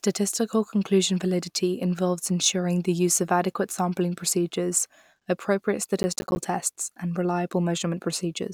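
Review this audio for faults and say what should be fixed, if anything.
From 6.03 to 6.37 s the processor fell behind and missed a run of buffer deadlines, which fits about ten buffers of around 10 ms each. Each miss left a hard-edged gap of silence, heard as processor overload crackle tearing through the speech. Prevent this by lowering processing load or raising buffer size so every deadline is met.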